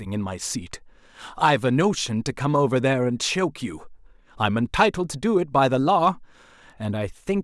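Speech recording, no technical faults detected anywhere in the audio.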